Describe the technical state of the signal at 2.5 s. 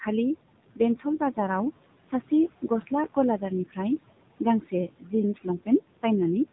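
At 2.5 s the speech sounds buzzy and synthetic, with a dull top and nothing audible above about 3.8 kHz. This is the AMR narrowband mobile codec, present across the whole clip. It rebuilds the voice from a vocal-tract model fed by a few pulses per frame, and damage this plain fits a low rate around 7.4 kbps.

The residual background sinks between the words and rises under them. These are noise suppressor artifacts, also running throughout. The suppressor pulls down the frequency bands it judges to be steady noise, by about 18 dB, frame by frame. The room noise it acts on sits about 17 dB below the speech.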